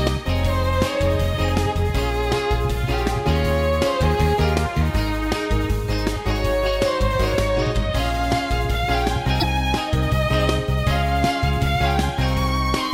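Around 9.39 to 9.44 s there's a quick glitch, roughly 40 ms long, where the audio lurches forward. That's likely a broken MP3 bit reservoir: after a cut, the next frame pulls its data from the wrong bytes, and the span fits one or two 26 ms frames.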